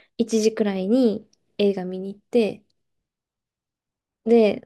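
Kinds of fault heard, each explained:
No kinds of fault are heard in this speech.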